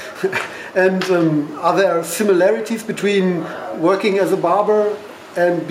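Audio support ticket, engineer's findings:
No audio faults found in this ticket's clip.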